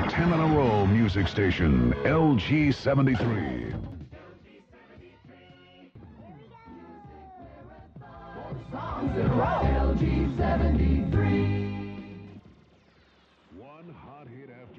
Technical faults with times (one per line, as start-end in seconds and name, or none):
7.96-9.33 zipper noise
11.38-12.33 zipper noise